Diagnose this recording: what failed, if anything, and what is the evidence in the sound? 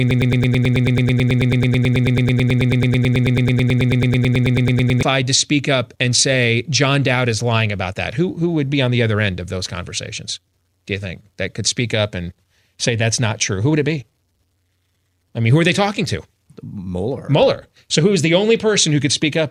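Broken-record loop: until 5.03 s, a 0.11 s fragment repeats 45 times as identical waveform blocks, likely from a stalled playback buffer, before "to speak up and".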